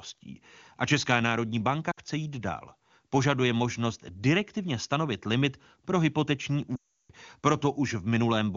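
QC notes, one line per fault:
1.91–1.99 s and 6.76–7.11 s, lost AMR speech frames: the decoder repeats the last good pitch and vocal-tract settings at falling gain. The 80 ms gap drops to near silence within two frames. The 340 ms run drops to near silence within two frames, then returns weak or rough.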